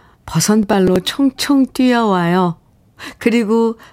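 From 0.63 to 1.31 s the speech carries processor overload crackle: several tiny buffers, each a few milliseconds long, miss their deadline and replay stale audio, giving gritty tearing. The waveform shows abrupt steps; the spectrogram shows thin vertical broadband streaks.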